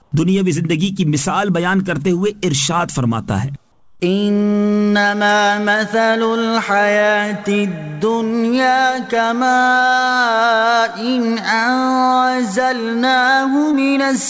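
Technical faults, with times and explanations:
0.02–0.12 s and 3.72–4.00 s, comfort noise in place of the background. The quiet background, already about 42 to 43 dB below the loudest parts, turns into a steady, featureless hiss for 100 ms and then 280 ms. It drops about 2 dB. Its texture flattens. The likely cause is discontinuous transmission. The sender stops sending during the pauses, and the receiver fills each one with synthetic noise shaped roughly like the real background.
13.72–13.75 s, short concealed packet loss. About 20 ms of audio failed to reach the decoder in time. Roughly 12 ms of the hole was bridged by extending the preceding sound, and then the decoder blended back into the real signal. The result is a brief smear or wobble. On this call path, where nothing is heard above 8 kHz, consistent with G.722 at 64 kbps, the patch sits inside an already band-limited sound.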